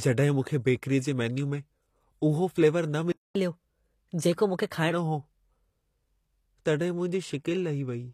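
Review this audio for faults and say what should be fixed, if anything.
The treble is plainly damaged all the way through. The s sounds come out gritty and metallic, and the upper harmonics don't line up with the lower ones. That's likely HE-AAC compression: the encoder keeps only the lower band and rebuilds the top by copying it upward under a coarse envelope, which fits a low bitrate around 24 kbps. Encode at a higher bitrate or with plain AAC so the real treble survives.

At 3.12 s the speech cuts out and stays silent until 3.35 s, a gap of about 0.23 s. That playback stall likely comes from the player running out of data or its thread getting blocked. Give the player a larger buffer so it doesn't run dry.

Right after the gap, from 3.35 s to 4.91 s, the speech runs at 1.15 times normal speed and sits about two semitones high. This is catch-up at higher speed: the player resamples its backlog faster to recover the lost time. 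Time-stretch the catch-up without shifting pitch, or skip it if sync isn't critical.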